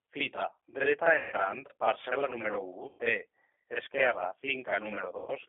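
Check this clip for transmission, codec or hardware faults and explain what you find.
Two faults are audible: the speech runs through a G.729 codec for its whole length, and three short VoIP packet losses are concealed by that codec.

G.729 codec, throughout: the speech sounds narrow, slightly rough and synthetic, confined to roughly 300 Hz to 3.5 kHz with nothing above. The damage is plainly audible. At 8 kbit/s the decoder rebuilds each frame from a vocal tract filter, a pitch predictor and a few pulses, not the actual waveform.

VoIP packet loss concealed by the speech codec, at 1.16 to 1.35 s, 2.89 to 3.00 s and 5.18 to 5.31 s: the speech smears into a buzzy tone or coloured noise that fades, and stays weak briefly afterwards. About 160 ms, 100 ms and 100 ms of audio went missing. The decoder filled each gap by extending its last pitch and filter with falling gain, and it needed a few frames to recover.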